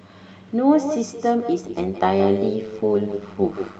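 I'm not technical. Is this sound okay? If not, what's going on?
No. Echo with no canceller runs through the whole clip. The other end of the call played this speech through a loudspeaker, its microphone picked it up again, and nothing removed it before sending it back. So every bit of speech is followed roughly 150 milliseconds later by a second copy, quieter and thinner.

Overlap-add ripple starts at 1.64 s and lasts to the end. The software chops audio into tiny overlapping slices and glues them back together. Here the slices don't join evenly, so the volume pulses up and down around 100 times a second. That pulsing makes the speech sound buzzy and metallic, with extra tones around each note.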